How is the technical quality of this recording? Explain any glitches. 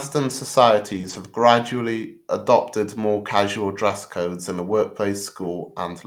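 The speech has a run of network-loss damage, heard as short rough or smeared patches clustered near the start and again around 3.9 to 4.8 s.

Lost packets rebuilt from error correction occur at 0.93–0.99 s, at 1.05–1.15 s just before "have gradually adopted more", at 3.89–3.91 s, and at 4.71–4.77 s just after "codes in the", covering 40, 60, 20 and 40 ms respectively. The following packet carried a low-bitrate backup copy of the missing audio, and the decoder played that copy. No gap or smear results. The real sound continues but turns briefly coarse and noisy. That roughness in otherwise intact audio distinguishes it from concealment.

Short concealed packet loss appears at 1.01–1.05 s and at 3.87–3.91 s, between "gradually adopted more casual" and "codes in the", with 20 ms filled each time. No backup copy arrived, so the receiver invented the gap by extending the preceding sound and then blending back into the real signal. 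It is heard as a brief smear or wobble. That is guessed sound rather than a degraded version of the real thing, which is what separates it from the error-correction repairs around it.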